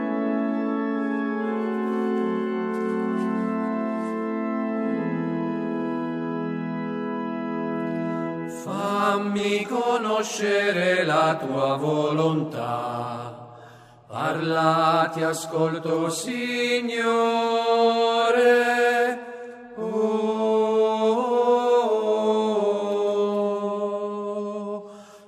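No technical faults can be heard anywhere in the recording. Nothing in it needs a timestamp or a note.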